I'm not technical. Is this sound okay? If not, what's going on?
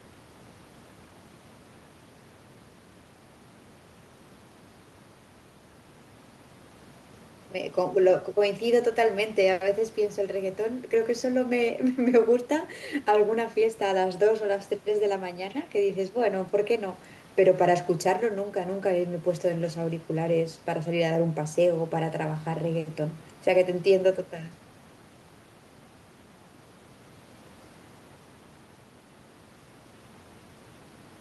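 Yes, nothing stood out as a problem when listening to this recording.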